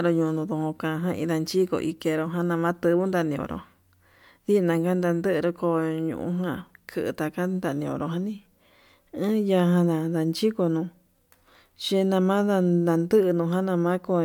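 Nothing technically wrong turns up anywhere in this speech recording, so there's no fault here to time or trace to a cause.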